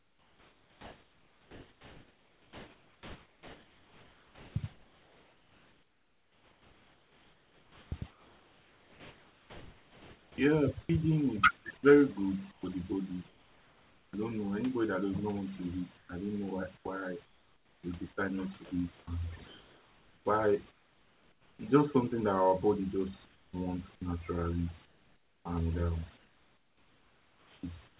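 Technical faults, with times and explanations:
Throughout, overdone noise removal: an aggressive noise reducer pulls individual frequency bands down or out whenever they sit near its noise estimate. The background drops and breaks up into twinkling specks, and the quieter parts of the speech are stripped away.
0.00 to 14.13 s and 15.97 to 21.59 s, sound chopped by the voice detector: the sender likely toggled transmission on and off repeatedly. Quiet syllables and word edges are swapped for comfort noise, about 11 s of the first stretch before "I don't know anybody" and about 2.5 s of the second before "just something." The speech sounds choppy.
23.25 to 23.53 s and 24.85 to 27.99 s, comfort noise in place of the background: with no speech detected, the sender likely paused transmission. The receiver fills the gap with smooth, featureless synthetic noise instead of the real room background. 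In the first gap it is about 6 dB quieter than the real background.
25.43 to 25.45 s, onset clipped by the voice detector: the detector was likely slow to register the returning speech. The first 20 ms were not sent and comfort noise stood in, so the sound begins abruptly, without its soft start.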